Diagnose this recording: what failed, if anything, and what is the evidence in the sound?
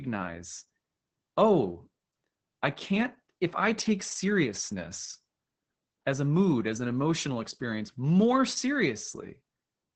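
The failure is at the codec stage: Opus voice compression, heavy throughout the speech. Nothing sits above about 8.6 kHz, and the voice is muffled, hoarse and faintly robotic, which points to the SILK linear-prediction coder running wideband at roughly 10 kbps. At that rate the excitation is quantised coarsely, so the voice loses its natural grain. A plain low-pass filter would only dull the top end, while this coding damage roughens the voice itself.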